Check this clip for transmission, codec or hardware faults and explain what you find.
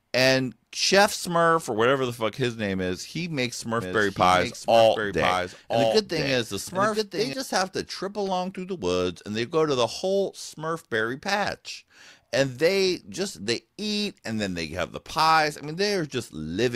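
One fault stands out. From 3.81 to 7.33 s, starting just before "just have to trip", a doubled audio track plays: a dry copy about a second late and about 5 dB quieter, likely from a slower second capture path.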